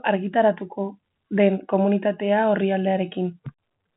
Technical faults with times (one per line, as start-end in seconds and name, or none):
none